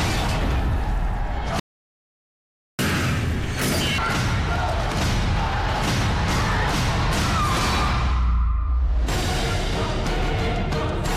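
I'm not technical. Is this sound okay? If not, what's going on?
No. A playback stall starts at 1.60 s: the sound cuts out mid-flow and stays silent for about 1.2 seconds, until 2.79 s. The player likely ran short of incoming audio, or was briefly held up by other work on the device, so it had nothing to send to the speakers. When it recovers, the sound resumes where it stopped rather than skipping ahead.

Catch-up at higher speed follows immediately, from 2.79 s to 3.98 s. To make up the time lost in the silence, the player runs the waiting audio at double speed. Because it does this by simply playing faster, the pitch jumps too, by nearly an octave, giving a squeaky, hurried sound. At 3.98 s it has caught up, and speed and pitch drop back to normal.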